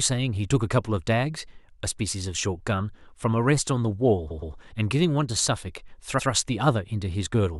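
A stutter in the speech at 4.30 s replays the same 0.12 s block twice more, adding 0.23 s, and again at 6.18 s with one extra play. These are repeated frames: a short run of compressed frames was duplicated, so the decoder played that stretch again.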